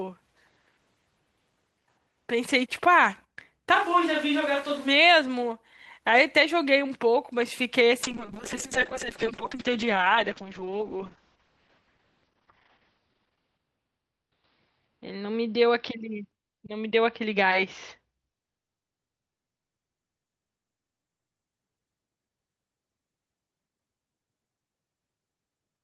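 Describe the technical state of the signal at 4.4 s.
At 4.4 s the speech turns suddenly roomy and hollow, thinner in the bass, about 5 dB quieter, with room noise well up behind it, from 3.76 to 4.86 s. This is likely a switch to a distant microphone after the close one dropped out.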